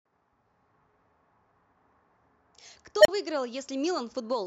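At 3.01 s an unstable filter runs away: a tone near 700 Hz swells in 42 ms to a clipped squeal, shown as a bright spectrogram line, then 32 ms of flat waveform.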